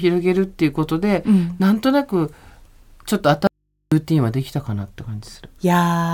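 At 3.47 s the speech drops out abruptly and stays gone until 3.92 s, about 445 ms later, leaving only a low mains hum somewhere around 55 dB below the speech. This is an audio dropout to a faint residue, likely a momentary loss of the source while the input stayed open and picked up hum. A natural pause would keep the room tone and a fade would taper; here the cut and the return are both sudden.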